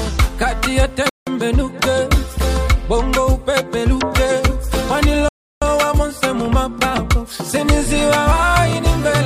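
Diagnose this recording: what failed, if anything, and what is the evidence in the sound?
The playback stage suffered a rebuffering stall: the player exhausted its downloaded audio and paused until more arrived. The sound drops to silence from 1.09 to 1.27 s (about 0.17 s) and from 5.29 to 5.62 s (about 0.33 s), then resumes exactly where it stopped. Nothing is lost, only time added.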